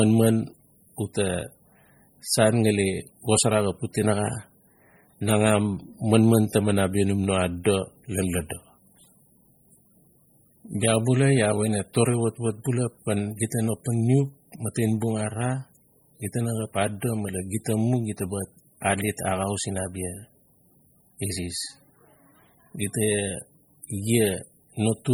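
Throughout, the speech has heavy MP3 compression damage. It sounds watery and swirly as weak frequency lines flicker, likely from a starved encode fitting roughly 32 kbps.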